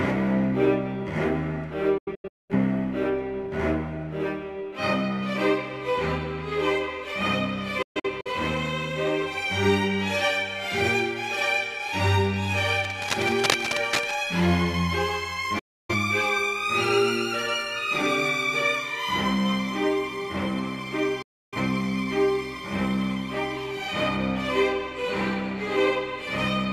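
The audio has four digital broadcast dropouts, at 1.98 to 2.54 s, 7.82 to 8.31 s, 15.59 to 15.94 s and 21.22 to 21.58 s. Each time the sound fades out within about 8 ms and later returns. The first two break into several short holes. The receiver muted while frames were lost, and that content is gone. The hole lengths fit frames of about 43 ms. From 12.71 to 14.19 s, dense, uneven scratching rides over the sound, only a little quieter than the signal itself. This is cable scratch noise, likely from a worn cable, connector or control being moved.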